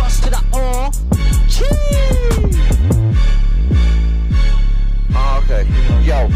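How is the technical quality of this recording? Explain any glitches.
No glitches or technical faults can be heard in this recording. Nothing in the audio stands out as a problem that needs explaining.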